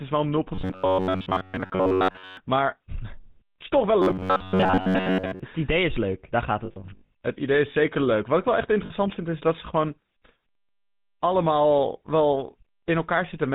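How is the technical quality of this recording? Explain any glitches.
The recording is of poor technical quality: the speech carries plainly audible GSM coding damage throughout, two stretches turn robotic, and two spots show dropped frames.

GSM full-rate codec, throughout. The whole clip sounds like it went through the original 13 kbps GSM full-rate coder. That codec describes the vocal tract with a simple filter and drives it with a sparse, regularly spaced pulse train, discarding two of every three excitation samples. Nothing above 4 kHz survives. The result here is clearly audible: a narrow, muffled band with a buzzy, gravelly roughness over the speech.

Robotic sound from repeated short buffers, 0.55 to 2.37 s and 4.02 to 5.40 s. Both stretches take on a rigid, metallic buzz at about 94 Hz that loosely tracks the speech. The likely cause is audio arriving too seldom, with the player looping its last chunk to fill the gap, so most of the real audio in these stretches is skipped. 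A 94 Hz buzz corresponds to a repeat period near 10.7 ms.

Lost GSM frames, 6.66 to 7.09 s and 8.86 to 8.91 s. When a frame arrives bad, the decoder reuses the last good frame's settings at decreasing level, so the sound freezes into a rough metallic ring instead of dropping out. The first episode spreads about 280 ms of missing audio across 440 ms, with the longest gap around 70 ms, and sounds ringing. The second is a brief 40 ms hiccup.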